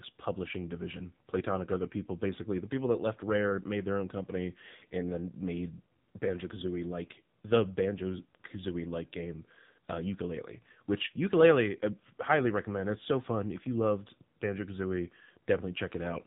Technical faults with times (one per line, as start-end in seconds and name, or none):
0.00-16.26 AMR narrowband mobile codec